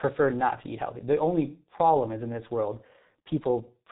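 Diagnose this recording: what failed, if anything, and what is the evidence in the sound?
Codec stage: G.723.1 codec damage throughout. Nothing above 3.8 kHz survives, and the muffled, hoarse texture with smeared consonants fits a 6.3 kbit/s frame-based speech model.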